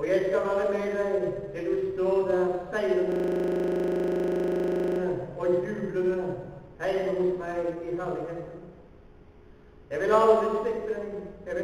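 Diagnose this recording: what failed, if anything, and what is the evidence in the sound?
System hang loop at 3.12 to 5.0 s: the driver or buffer stage froze while hardware replayed one 40 ms block, producing a steady 25 Hz buzz.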